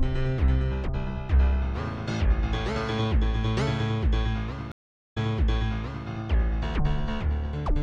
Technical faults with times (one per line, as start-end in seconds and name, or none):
4.72-6.07 stream reconnect